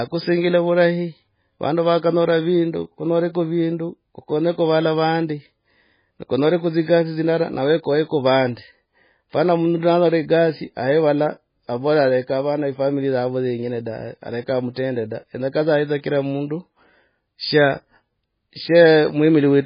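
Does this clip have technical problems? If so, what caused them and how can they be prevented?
Yes. Throughout, the speech sounds watery and swirly with nothing above 5 kHz, likely from heavy MP3 compression cutting treble and dropping weak detail, which fits a bitrate near 16 kbps. Encoding at a much higher bitrate would prevent it.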